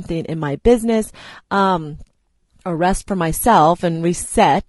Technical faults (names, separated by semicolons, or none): low-delay AAC compression